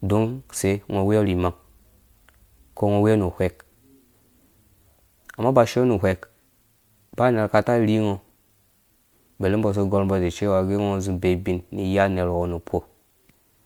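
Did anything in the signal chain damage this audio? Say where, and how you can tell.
Yes. Generation loss runs through the whole speech clip, from start to finish, at the codec stage. The sound is swirly and hollow, with smeared consonant attacks and a watery texture that seems worse than a single pass of its bitrate would give, while content still reaches about 21 kHz. The likely cause is MP3 encoding repeated about three times, consistent with 128 kbit/s. Each re-encode quantises on a shifted frame grid, so noise and spectral gaps accumulate.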